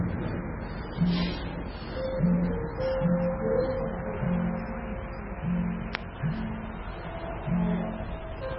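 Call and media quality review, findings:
Whole clip: treble gone above 5.6 kHz, watery, swirly texture with metallic chirps and smeared attacks. Likely MP3 compression at a very low bitrate, near 16 kbps. Spectrogram: flat ceiling at 5.6 kHz, flickering holes where weak frequency lines drop frame to frame.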